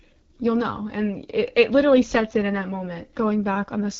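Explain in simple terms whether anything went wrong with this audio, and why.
Yes, the whole clip carries AMR wideband (HD Voice) codec damage. This phone codec was run at one of its lowest settings, so speech sounds rough and raspy throughout. Unlike dropouts, the damage is steady, and the top end remains as a hiss-like fill.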